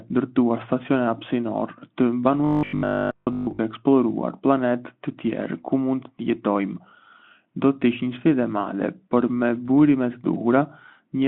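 From 2.45 to 3.61 s, after "ndërtuar stacione hapësinore të", a metallic 50 Hz buzz appears, likely robotic sound from repeated 20 ms buffers, showing rigid spectrogram stripes.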